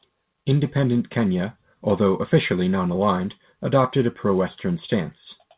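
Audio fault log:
No faults logged; the speech comes over a call path whose content stops at 4 kHz, consistent with a G.711 mu-law codec.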